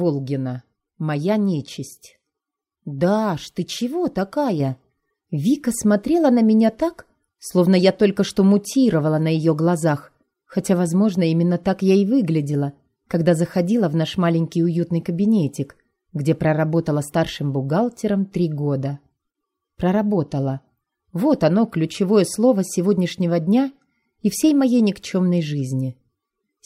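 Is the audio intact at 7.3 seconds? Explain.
No. A sudden gain jump at 4.6 s raises the level by about 4 dB, and it stays raised through 7.3 s to the end. The likely cause is a gain change applied between two samples with no ramp. Unlike a fade or compressor pumping, the sound and its background noise step up together at once and hold there.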